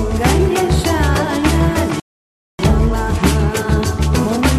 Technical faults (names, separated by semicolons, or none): rebuffering stall